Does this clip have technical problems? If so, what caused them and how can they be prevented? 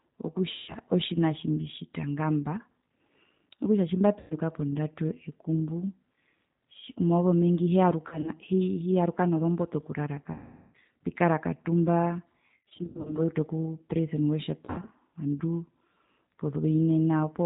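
Yes. The speech was carried over a G.729 codec, most likely the G.729A variant, and its sound fits an 8 kbit/s link. The coder rebuilt each 10 ms frame from a vocal tract filter, a pitch predictor and a few pulses, and it discarded everything above 4 kHz. Throughout the clip the damage is plainly audible as a dull, band-limited, slightly rough and synthetic quality. Using a wideband codec such as G.722 or Opus would prevent it.

There is also VoIP packet loss concealed by the speech codec. Packets went missing, and the decoder filled each gap by repeating its last pitch and filter at falling gain. The gaps are at 0.52–0.75 s (160 ms lost), 4.20–4.34 s (100 ms), 10.32–10.76 s (420 ms) and 14.66–14.90 s (140 ms, scattered). Losses also fall at 8.08–8.30 s (60 ms, scattered) and 12.57–13.20 s (300 ms, scattered). Each gap turns into a buzzy tone or coloured noise that fades, and the speech stays weak just after it. 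The pattern fits 20 ms packets. A jitter buffer, forward error correction and a less congested network path would prevent it.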